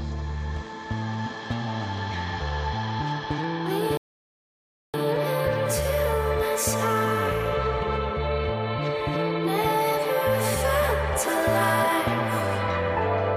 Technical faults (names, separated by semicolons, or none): rebuffering stall